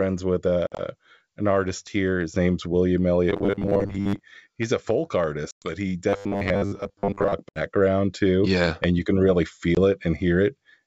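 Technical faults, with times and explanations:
0.67–0.82 s, 5.51–5.73 s, 7.49–7.60 s and 9.75 s, packet loss on an ADPCM call: audio goes missing (80, 110, 70 and 20 ms) and becomes hard-edged silent holes, the first scattered over 120 ms just before "an artist here", the last right after "and you can really". Afterward the receiver's predictor and step size no longer match the sender's, so the sound resumes slightly distorted until they realign.
3.30–4.20 s and 6.09–7.34 s, robotic sound from repeated short buffers: audio arrives too rarely, so the playback likely loops the last 10 ms, replacing most of the real signal, the first stretch ending just before "he's a folk". The loops impose a rigid 100 Hz metallic buzz that only loosely tracks the speech.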